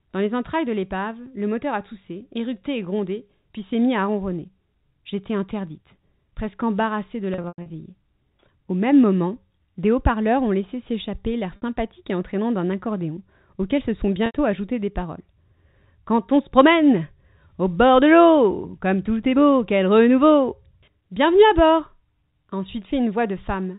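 Packet loss with pitch repetition occurs at 7.34–7.70 s, 11.56–11.62 s and 14.26–14.34 s. The receiver fills the gaps by repeating the last pitch period, which sounds buzzy and held. On a spectrogram these appear as flat, unchanging harmonic stripes.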